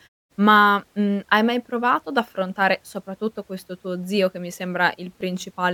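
At 5.21 s, near the end of the speech, there is an overlap between stream segments. Two consecutive segments claimed the same stretch of time, and trimming that shared span removed roughly 17 ms of audio that had never actually been duplicated; the segments are about 2 s long. It is heard as a brief click or tiny skip. The waveform shows an abrupt jump, and the spectrogram shows a thin vertical broadband line. The muted pauses sound as intended.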